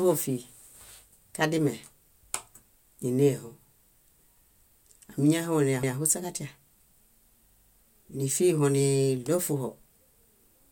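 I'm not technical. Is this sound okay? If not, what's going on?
No. The speech stutters twice: around 5.83 s a short piece plays twice, and from 7.50 to 7.74 s a tiny piece plays four times. These are repeated frames: bits of the audio got saved or sent more than once, so they replay.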